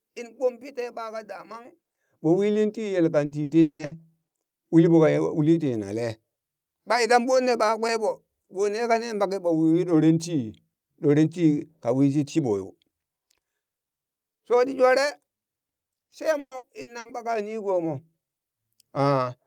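A speech clip with two bursts of repeated packet loss, giving a robotic sound. The first runs from 3.25 to 3.94 s. The second runs from 16.39 to 17.08 s. In each, the audio breaks into four short holes in quick succession. Each hole is papered over by stretching the last bit of sound. That repetition turns the voice choppy, with pieces missing. About 52% of the first stretch and 43% of the second is filled this way. The longest holes are 180 ms and 120 ms.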